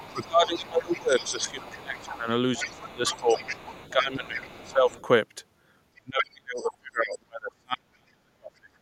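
From 0.0 to 5.05 s the other side's voice leaks through, a second voice faintly audible some 20 dB under the talker, likely loudspeaker echo the canceller left behind. Unlike the suppression, this adds a sound rather than taking the talker away. Across nearly the same span, 0.11 to 4.91 s, speech is suppressed in double talk: the talker's voice dips by up to around 15 dB for about four seconds, likely because the canceller turned everything down while both sides spoke. From 5.93 to 8.7 s the suppression deepens, with the voice falling by as much as around 40 dB over roughly three seconds, while between 6.2 and 7.18 s the leaked voice rises to nearly the talker's level.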